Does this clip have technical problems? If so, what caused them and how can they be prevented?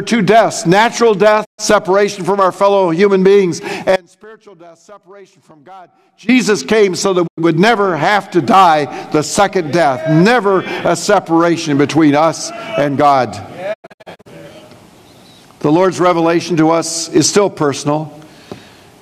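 Yes. A digital broadcast dropout mutes the sound at 1.44 to 1.60 s, 7.26 to 7.40 s and 13.72 to 14.28 s. Each time the receiver lost good frames and quickly faded to silence. The last event breaks into several short holes spread over about half a second. Better reception, with a stronger antenna, better placement or more robust error protection, would prevent these dropouts.

An audio dropout to a faint residue runs from 3.96 to 6.29 s. The sound cuts abruptly to a faint leak roughly 25 dB down, likely because the signal feed broke while the later chain stayed live. Secure connectors and a monitored, redundant feed would prevent this.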